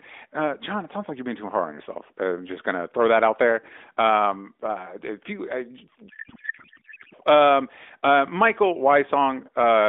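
From 6.10 to 7.14 s, a codec payload misread garbles the speech into warbling noise. Octet-aligned AMR frames were parsed as bandwidth-efficient, so the decoder read misplaced fields.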